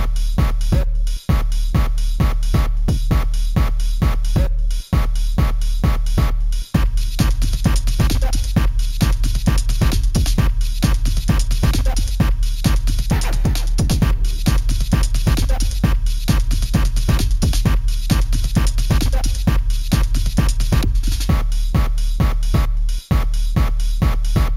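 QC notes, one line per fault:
Throughout: imaging from sample-and-hold upsampling. A mirrored copy of the spectrum fills 8 to 16 kHz at about 24 dB below the signal, pointing to a 16 kHz source raised to 48 kHz by repeating samples unfiltered. This gives a metallic fizz that tracks the sound's level and moves against its pitch.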